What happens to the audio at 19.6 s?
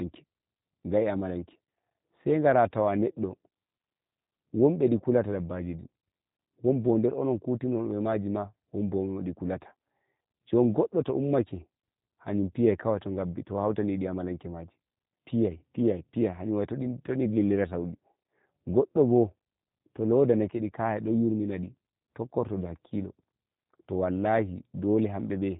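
At 19.6 s the speech sounds slightly rough and synthetic, with a thin, band-limited quality and nothing above 4 kHz. This is G.729 codec damage, and it runs through the whole clip rather than starting at that moment. The codec rebuilds each 10 ms frame from a vocal tract filter, a pitch predictor and a few pulses in each half-frame, and that sparse excitation gives the buzzy, artificial texture, which fits an 8 kbit/s G.729A stream.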